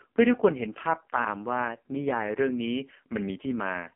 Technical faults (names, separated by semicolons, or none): AMR narrowband mobile codec